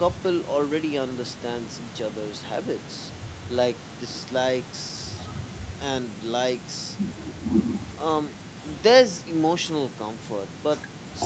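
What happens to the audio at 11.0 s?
Nothing goes wrong at 11.0 s; the speech there passes through intact, with no dropout, glitch or distortion.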